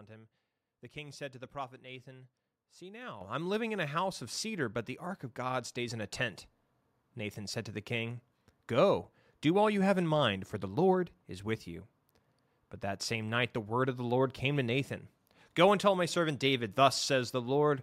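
At 3.21 s the call software, judging the microphone too quiet, raised its input volume in one step by about 9 dB, just before "I'm living in a". At 4.23 s, after "living in a house", a second step of about 2 dB followed. Each microphone volume step lifts voice and background noise together abruptly.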